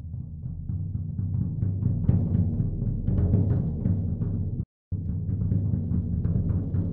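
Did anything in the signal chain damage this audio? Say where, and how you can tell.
Yes. At playback, a stall silences the sound from 4.63 to 4.92 s, about 0.28 s, then it resumes; likely a starved or blocked player buffer rather than a dropout.

Time-compressed catch-up follows from 4.92 to 6.78 s. Audio runs about 1.15 times fast at unchanged pitch, unlike resampling, which shifts pitch.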